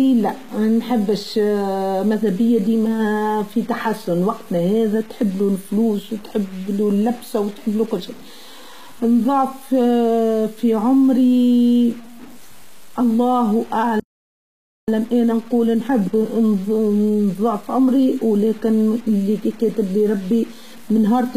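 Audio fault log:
Throughout: low bit depth without dither. The speech sits on a coarse, grainy layer of distortion that moves with the voice rather than hissing steadily underneath it. Quiet syllables and word tails get especially rough, breaking into a buzzy sputter as they fade. The noise is only about 25 dB under the signal, which fits roughly 6-bit audio. It was likely truncated straight down to that depth with no dither to loosen the error from the signal.
Throughout: HE-AAC compression. Sibilants come out smeared and a little metallic, with a lispy edge on the s sounds, and the top end doesn't quite belong to the voice underneath it. The treble looks rebuilt rather than carried, copied up from the lower bands, and nothing reaches past about 14.9 kHz. That points to a low-rate HE-AAC encode, likely somewhere near 20 kbps, with its band replication clearly audible.
13.997–14.88 s: playback stall. 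The speech cuts out mid-flow and goes dead silent for about 0.88 s, then picks up again. That's a long enough hole to notice plainly. It sounds like the player starved for data or got blocked and couldn't feed the output.
14.88–17.88 s: time-compressed catch-up. Right after the gap, from "ولاكن إلي كاتبلي ربي" onward, the talking comes out hurried, about 1.15 times normal speed, for three seconds. The pitch holds steady. That's the player trimming out small slices and cross-fading the joins to work off the backlog the stall left behind.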